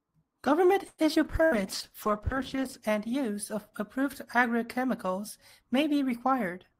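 From 0.87 to 1.01 s a call audio freeze stretches the sound into a fading buzz or hiss for about 108 ms, likely packets stalled in transit. Nothing is lost afterwards, unlike a burst loss. At 1.14 to 1.18 s, short concealed packet loss removes about 40 ms and leaves only a brief smear or wobble, far shorter than a freeze. A call bitrate drop runs from 1.27 to 2.85 s, with the encoder cut from 32 to 11 kbps and held at its lowest for about 1.47 s. The speech turns rough and muffled rather than gapped, recovering just before "and use of approved". Within that stretch, from 1.44 to 1.63 s, a burst of packet loss holds the sound as a fading buzz or hiss for about 80 ms. It then resumes with about 80 ms of speech skipped, which sets it apart from a freeze.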